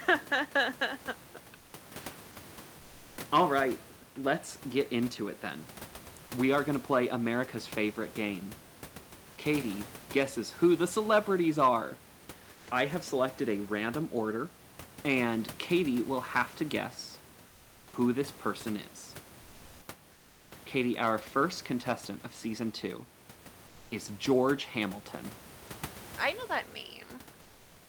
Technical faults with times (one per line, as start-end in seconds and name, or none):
1.57-1.73 comfort noise in place of the background
12.53-12.67 comfort noise in place of the background
17.47-17.93 comfort noise in place of the background
19.41-19.87 comfort noise in place of the background
20.13-20.51 comfort noise in place of the background
23.67-23.91 comfort noise in place of the background